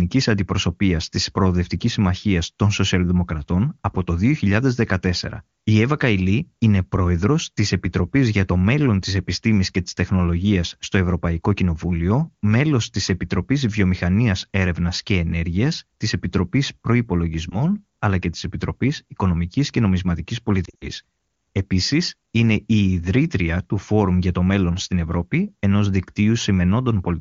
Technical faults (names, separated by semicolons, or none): lost AMR speech frames